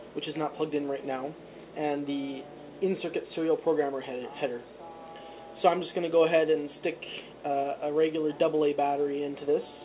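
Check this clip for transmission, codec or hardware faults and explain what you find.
No transmission, codec or hardware fault can be heard in this clip. It has the narrowband sound of a working call path, with nothing above 4 kHz, which fits a G.711-style telephone codec.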